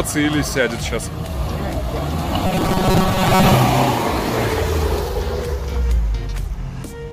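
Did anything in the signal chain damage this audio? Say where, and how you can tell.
Yes: the driver or buffer stage likely ran dry and looped a 5.3 ms slice, so 2.47 to 3.54 s has robotic sound from repeated short buffers, a rigid 188 Hz buzz.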